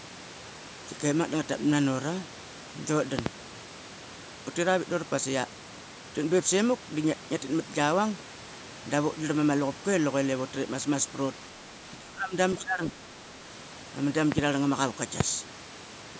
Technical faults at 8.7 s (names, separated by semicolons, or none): none